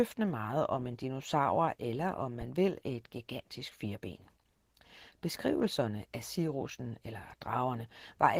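Throughout the speech, Opus voice compression at 16 kbps is plainly audible. The codec runs in hybrid mode: a linear-prediction layer carries everything below 8 kHz, and a thin transform layer covers the band above it. With so few bits the excitation is coarse, so the voice sounds hoarse and faintly robotic. On a spectrogram the harmonics below 8 kHz look smeared and noisy, while the region above is sparse and patchy, changing in 20 ms blocks.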